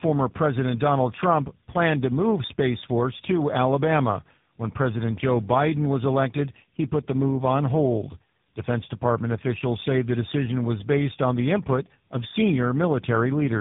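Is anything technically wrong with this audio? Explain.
Yes. The speech carries tandem speech coding for its whole length. It was passed through three low-rate speech codecs in a row, GSM full rate twice and finally AMR-NB at 10.2 kbit/s, with G.711 links in between. Each coder re-encoded the previous one's already damaged output, so the errors stack. The result sounds rough, muffled and warbly. A spectrogram shows nothing above 3.7 kHz, with smeared, blotchy formant bands. The waveform looks grainy and loses its crisp onsets.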